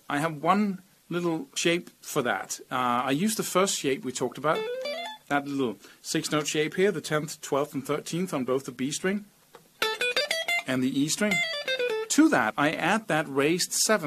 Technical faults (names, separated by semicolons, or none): compressed frames skipped